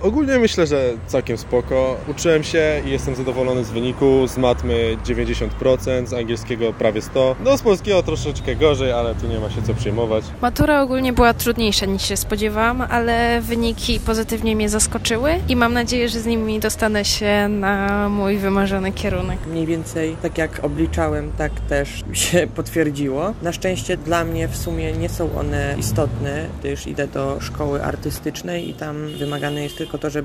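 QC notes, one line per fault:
No fault found; nothing to log in the QC notes.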